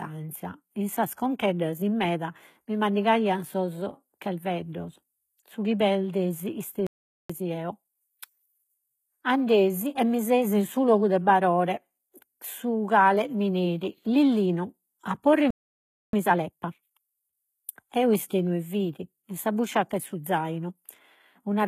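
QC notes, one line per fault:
throughout: HE-AAC compression. The treble is bright but synthetic, with gritty, lispy sibilants and plainly audible codec damage. This likely comes from spectral band replication copying lower bands upward, which fits HE-AAC v2 at about 20 kbps.
6.87–7.30 s and 15.51–16.13 s: playback stall. The audio drops to silence mid-flow, first just after "chi perdesi" for 0.43 s, then for 0.63 s. This is likely because the player ran out of buffered data or was blocked.
7.30–9.00 s and 16.13–17.37 s: time-compressed catch-up. After each stall the speech runs hurried at normal pitch, at 1.25x and then 1.5x. The player is cutting and cross-fading short pieces to clear the backlog.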